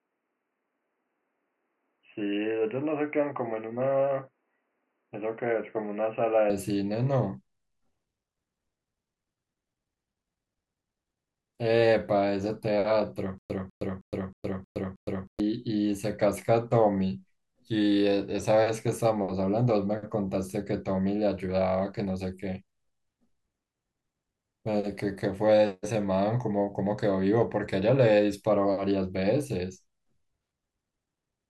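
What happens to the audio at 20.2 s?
Nothing goes wrong at 20.2 s: the speech carries straight through that moment without a dropout, click, glitch or other fault.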